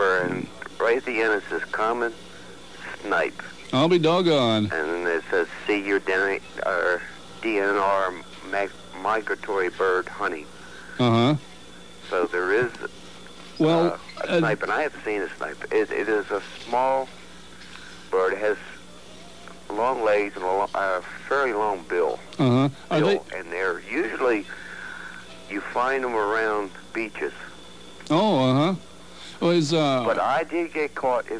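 No technical faults can be heard anywhere in the recording. Nothing breaks into the sound at any point, and it carries on without interruption.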